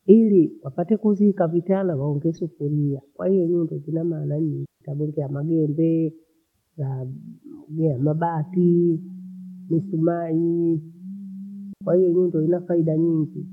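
At 4.66 s the speech drops into a clean hole of near silence lasting about 155 ms, returning at 4.81 s, and at 11.73 s a shorter gap of about 81 ms follows, ending at 11.81 s. Neither gap has a click or burst of noise at its edges. These are digital wireless dropouts: the radio link lost too much data, so the receiver muted with a very quick fade rather than pass corrupted audio.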